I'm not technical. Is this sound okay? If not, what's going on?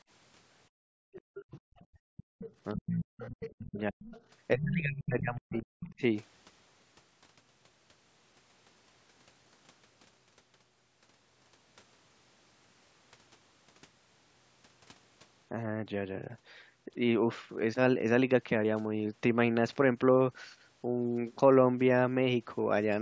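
No. From 0.69 to 2.39 s, the background is gated by the echo canceller. The quiet room sound behind the talker dips sharply or vanishes, about a second in total, then returns. Unlike the voice problems below, this one is in the background.

A second, fainter voice is heard from 1.13 to 1.85 s, 2.17 to 4.22 s, 4.6 to 5.02 s and 5.56 to 5.86 s. This is likely the other side's voice leaking through: the call's loudspeaker reached the microphone and wasn't fully removed. It sits well under the talker's voice.

From 2.74 to 4.1 s and 4.53 to 6.02 s, the talker's own voice drops away steeply in pieces, most likely speech suppressed in double talk. Both sides spoke at once, so the echo remover couldn't tell them apart and turned everything down. Here the main voice itself is cut, not just the background.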